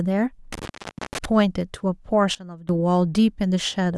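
From 0.53 s to 1.25 s the speech is broken by an intermittent contact, a connector or cable losing its connection. The signal drops out for a total of about 480 ms in that stretch, with crackle at the edges of each gap and only faint hiss underneath. On a waveform the speech envelope collapses to a thin noise floor, and on a spectrogram the gaps show as near-empty columns bordered by broadband vertical streaks from the crackle.

Between 2.35 s and 2.69 s comes a sudden gain jump. Speech and background noise together drop by about 16 dB in a single step, with no fade, and recover at the end. The likely cause is a digital gain setting applied without a ramp. A waveform shows the amplitude stepping down abruptly, and a spectrogram shows every band, noise floor included, darkening at once with sharp vertical edges at both boundaries.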